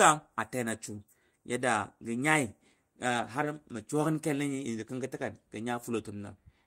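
At about 3.17 s there's a lost packet rebuilt from error correction: roughly 20 ms played from the next packet's low-bitrate copy, so no gap, just a brief rougher, noisier patch.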